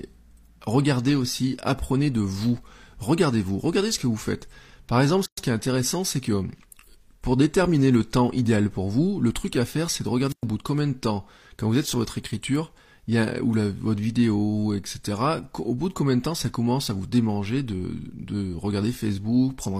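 At 5.26 s the speech stops dead for about 118 ms, ending at 5.38 s, just before "ce qui est intéressant". This is a gap at a join of encoded pieces. The recording was encoded in separate sections and spliced without trimming. The silent lead-in and padded last frame from each encoder pass were left in place. The codec smears the edges of the gap. The speech then resumes exactly where it broke off.

At 10.28 s, after "à faire c'est de", comes a wireless microphone squelch dropout. The analogue FM radio link weakened until the receiver's squelch shut the output. Hiss swells briefly first. Then the audio drops to near silence for about 109 ms. The speech returns at 10.45 s with "bout de combien de".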